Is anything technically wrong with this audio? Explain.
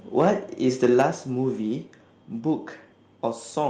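Yes. The speech has two problems, both in about the first second.

Microphone overload occurs from 0.20 to 0.28 s and again from 0.83 to 1.02 s. The peaks run about 4 dB past the converter's limit, likely from excessive input gain. A few percent of samples are flattened in the first burst and around one percent in the second, giving the loudest syllables a harsh, crackling edge.

At 1.02 s, right after the second distorted peak, the microphone volume steps down by about 4 dB, likely the call software cutting input gain once it detected clipping. Voice and background fall together in one abrupt step.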